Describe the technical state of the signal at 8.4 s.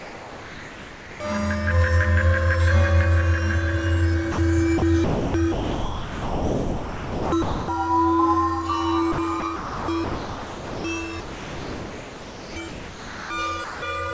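At 8.4 s the signal is intact, with no dropout, glitch or distortion, only the steady band limit of the call path, which passes nothing above 8 kHz, in keeping with a wideband G.722 codec at 64 kbps.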